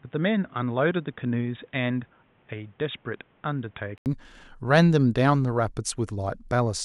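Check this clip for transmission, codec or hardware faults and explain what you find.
One fault is audible. From 0 to 4.06 s, the speech comes through an input switched to a poorer device, likely a headset's call profile. That narrower path passes nothing above 3.8 kHz, so the sound is dull and boxy. It runs about 5 dB quieter, with its own noise floor roughly 35 dB below the speech. An 80 ms silence marks the switch back. A spectrogram shows a flat ceiling at 3.8 kHz, a gap, then full bandwidth, and the waveform grows larger after the switch.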